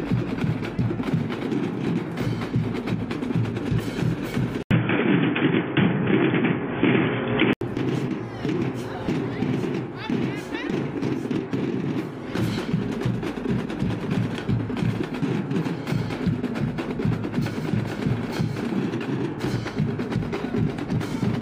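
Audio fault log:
4.63–7.61 s, input switched to a poorer device: an 80 ms gap, then boxy sound cut above 3.5 kHz and a level shift of about 5 dB, likely from a different microphone.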